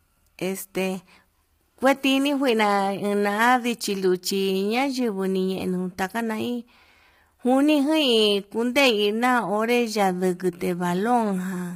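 Throughout the speech, the voice sounds rough and grainy, with noise filling the gaps between harmonics. Nothing is present above 15.6 kHz. This is likely low-delay AAC compression. Its short frames blur pitch detail, and the heavy damage fits a low bitrate near 24 kbps.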